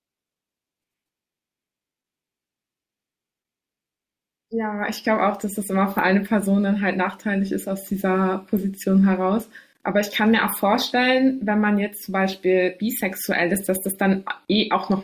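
No technical faults can be heard anywhere in this speech recording. Nothing breaks into the sound at any point, with no dropouts, clicks or sudden jumps in level.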